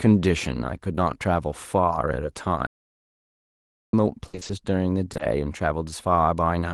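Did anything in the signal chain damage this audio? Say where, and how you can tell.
Yes. The network stage of the call damaged it in three places. Short concealed packet loss is heard at 0.95 to 0.99 s, and again at 5.13 to 5.17 s and 5.17 to 5.21 s. Each hole is about 20 ms. It shows up as a brief smear or wobble where the sound briefly stops moving. The receiver never got those packets in time. It extended the last sound to cover the hole and then blended back.

There is an audio dropout to silence from 2.67 to 3.93 s, about 1.26 s long. The sound cuts out and then comes back. The gap is silent, with no room tone at all. That points to the input stage, not the codec. The likely cause is a lost input, such as a disconnected device, a failed link or a stray mute, while the recorder kept writing silence.

Repeated packet loss, with its robotic sound, runs from 4.27 to 4.51 s. In that quarter-second the sound turns choppy. 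There are five separate holes, the longest about 60 ms. Together they cover about 140 ms, roughly 58% of the stretch. The jitter buffer kept running dry, and each patch was followed by another loss. Concealment dominated the stretch, so pieces are missing. All of this passed through the call codec path, whose bandwidth tops out near 12 kHz.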